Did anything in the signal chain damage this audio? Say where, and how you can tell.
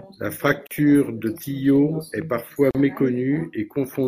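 Yes: the speech drops out for 40 ms at 0.67 s and again at 2.71 s, after "est parfois", then resumes: a gap at a join of separately encoded pieces, with untrimmed codec padding.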